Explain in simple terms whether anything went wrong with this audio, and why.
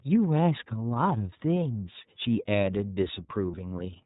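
Yes. The speech was squeezed through the iLBC codec, a phone-call codec that drops everything above 4 kHz, so the voice sounds muffled, slightly rough and synthetic throughout.

At 3.51 to 3.55 s, lost iLBC frames left a gap of about 30 ms that the decoder filled by repeating the last sound, heard as a brief buzzy hold.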